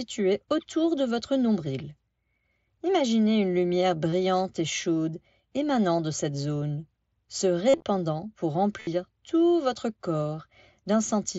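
Concealed Bluetooth headset packet loss occurs at 4.10–4.12 s after "une lumière", 7.69–7.86 s after "de cette zone se", and 8.79–8.87 s before "tout votre". Lost packets on the mSBC wideband link were patched by repeating recent speech waveform. The longer runs, up to about 50 ms, produce a buzzy held tone and a warble as real audio resumes.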